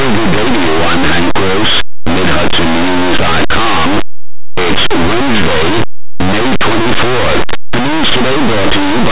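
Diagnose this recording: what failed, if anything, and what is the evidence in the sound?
Sample-format conversion: linear 8-bit speech was read as mu-law companded. Throughout, small values just on one side of zero expand to the largest outputs while those on the other side stay small, giving harsh, constant distortion.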